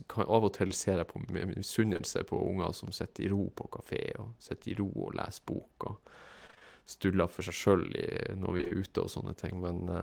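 Short concealed packet loss at 0.67 to 0.71 s, and again at 1.93 to 2.01 s as two back-to-back dropouts: each time roughly 20 ms of the stream failed to arrive, and the decoder bridged the hole by extending the preceding sound, then crossfaded back into the real signal. The patch is brief, heard as a smear or wobble.

Repeated packet loss (robotic sound) at 6.47 to 6.63 s and 8.57 to 8.72 s: within each span of about 150 ms, losses arrive in quick succession, the longest gap near 23 ms, and about half the stretch is synthesized rather than received. Because each concealed patch barely ends before the next begins, the sound turns choppy, with fragments dropping out.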